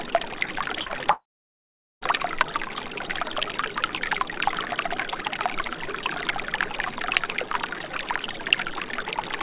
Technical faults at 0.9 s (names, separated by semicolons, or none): short concealed packet loss